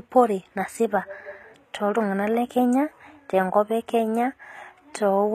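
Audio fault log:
throughout, HE-AAC compression: the speech keeps a bright top end, but its s sounds come out gritty and lispy, with a metallic sheen. The likely cause is HE-AAC coding at a rate that fits about 20 kbps: only the lower band is coded, and the treble is rebuilt by copying lower bands upward under a coarse envelope, so harmonics above the crossover fail to line up. On a spectrogram the upper band shows repeated, smeared copies of the lower structure.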